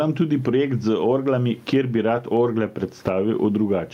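Gain pumping runs through the whole speech clip. The gain swings roughly 15 dB. The likely cause is excessive gain driving a fast limiter.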